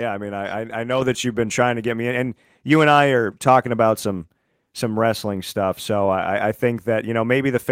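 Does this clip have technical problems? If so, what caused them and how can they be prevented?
Yes. Microphone volume stepped up at 1.02 s: the call software judged the input too quiet and raised it in one step, so speech and background both jump by about 6 dB. Disabling automatic microphone gain adjustment in the call software and setting a fixed, adequate input level prevents it.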